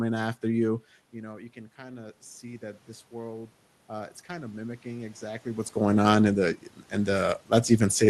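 From 1.13 s to 5.74 s you get automatic gain rising: the talker backs off around the 1-second mark, the level drops by about 17 dB, and the gain control slowly climbs about 9 dB to compensate, so voice and room noise swell together.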